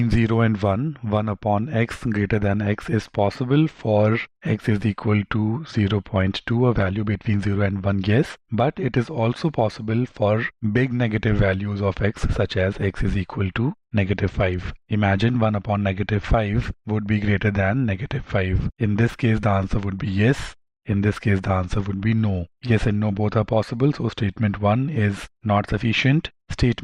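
No technical faults can be heard anywhere in this recording.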